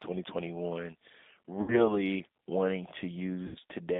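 G.729 codec throughout: speech is rebuilt from a filter, pitch predictor and sparse pulses at what sounds like 8 kbit/s, confined to 250 Hz–3.7 kHz, plainly rough and synthetic. VoIP packet loss concealed by the speech codec at 1.62–1.91 s and 3.47–3.57 s: the decoder stretches its last frame over gaps of 60 and 80 ms into a fading buzzy tone or coloured noise, and the sound stays weak until the frames rebuild.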